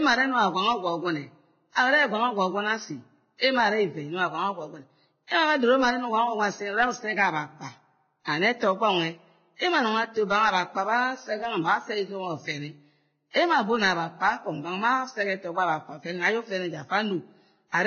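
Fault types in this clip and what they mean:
Transcoding between lossy codecs: The speech has nothing above 6.6 kHz throughout. A second codec's artefacts sit on the earlier codec's artefacts, likely from a low-bitrate Vorbis encode redone as WMA.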